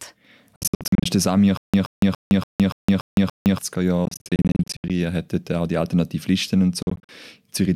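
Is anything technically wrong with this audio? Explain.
Yes, this speech has two kinds of fault.

From 0.56 to 1.06 s, 4.05 to 4.90 s and 6.83 to 7.09 s there are Bluetooth dropouts, likely from packets arriving too late and being discarded. About 0.32 s, 0.44 s and 0.15 s go missing, in clusters of short holes up to 73 ms long. The speech resumes further along. On a waveform these show as flat gaps.

From 1.57 to 3.58 s there is stutter with silent gaps, likely a stalled stream retrying. A 125 ms fragment repeats seven times, every 287 ms, with 162 ms of digital silence between repeats. A spectrogram shows identical blocks separated by empty bands.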